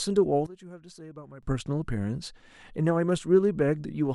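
From 0.46 to 1.43 s, one channel was likely inverted, so the shared centre cancels in mono and the speech falls away by about 18 dB.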